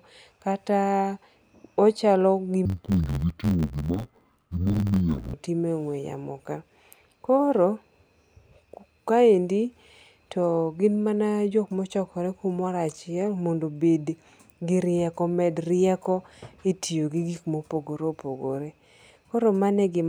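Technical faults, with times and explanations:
2.65–5.34 s, interleaved audio read as planar: the halves of each 11.6 ms block play together at half speed, so speech turns dull and robotic, buzzing at 86.1 Hz.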